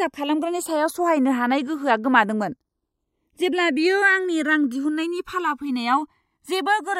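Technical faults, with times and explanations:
Throughout: channels drifting apart. The two sides of this speech behave as if captured on separately clocked devices, off by something like 200 parts per million, so the gap between them creeps up to around a millisecond by the end. Summed to mono, the comb notches glide steadily downward as that gap grows, giving a slow flanging sweep. A spectrogram shows dark notch bands curving down and closing together.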